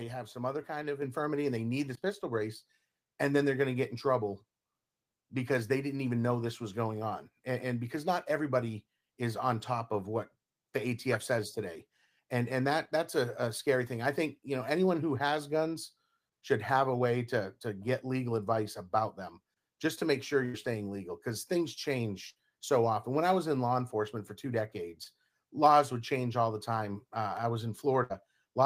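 At 1.02 s, between "some other kind of" and "infirmity and they need", the microphone volume stepped up by about 6 dB in a single jump. The voice and the room noise rise together and then stay at the higher level. A fade would ramp, and a louder talker would leave the background unchanged.

Three bursts of packet loss follow, at 20.45–20.55 s, at 22.29–22.38 s between "staying legal because things" and "so often when i", and at 28.03–28.12 s. In each, the receiver stretched the last sound over roughly 60 to 80 ms, fading it as a held buzz or hiss. The speech then resumes with that stretch gone.

At 25.04–25.07 s, between "law enforcement for two" and "laws would change all", there is a short concealed packet loss. Only about 20 ms was patched with continued sound, so it passes as a brief smear or wobble. It never reaches the audible held and fading tail of the longer bursts.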